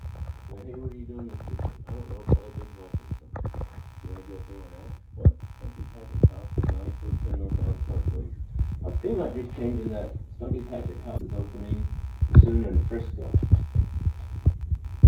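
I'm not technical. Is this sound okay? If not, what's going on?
No. Two things are wrong.

The first is computer activity noise. As the computer's processor, graphics card or mouse change how much power they draw, they disturb the electrical ground that the audio circuit shares with them. Throughout the clip this adds a quiet buzzing underneath the main sound, pulsing at roughly seventy times a second. It rises and falls with what the computer is doing, not with the sound itself.

The second is damaged data in a compressed stream. At 11.14 s, a short stretch of the compressed file was corrupted. The player couldn't read that part, lost its place, and had to hunt for the next clean section before carrying on. For about 0.07 s, until 11.21 s, you hear a brief chirp or blip, and the sound may seem to skip slightly forward.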